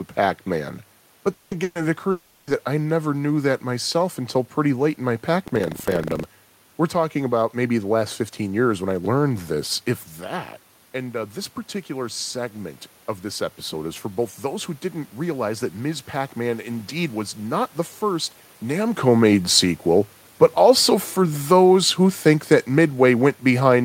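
Speech with three kinds of fault in its first six and a half seconds. From 1.33 to 1.54 s and again from 2.11 to 2.50 s, just before "I never knew that", the audio breaks off and the last sound is stretched into a fading buzz and hiss, covering about 180 ms and 360 ms of lost material. This is likely a long network dropout, with the receiver's concealment filling the gaps rather than leaving silence. Between them, from 1.63 to 1.78 s, a shorter burst of packet loss removes about 120 ms, which the receiver papers over with the same decaying continuation before jumping ahead. From 5.44 to 6.26 s, right after "pretty late in my", buffer tearing produces a rattling 25 Hz buzz. The writing and reading positions in the ring buffer cross every period, so roughly a tenth of each 40 ms buffer holds audio around 70 ms stale, with hard splices at both edges.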